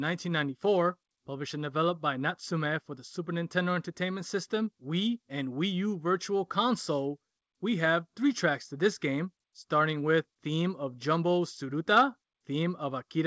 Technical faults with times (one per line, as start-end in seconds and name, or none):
none